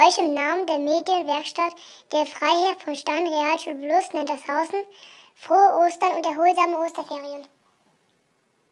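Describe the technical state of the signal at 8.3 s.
At 8.3 s you're inside a stretch of wrong sample rate that runs from 6.01 s to the end of the clip. The samples are being clocked out faster than they were captured, with no conversion, so speed and pitch rise together. Everything moves about 1.09 times too fast and sits roughly 1.5 semitones sharp, which fits material recorded at 22 kHz being played back at 24 kHz. It comes across as a slightly hurried, brightened lift.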